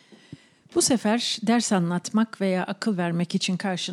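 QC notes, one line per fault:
No faults heard anywhere in this speech recording.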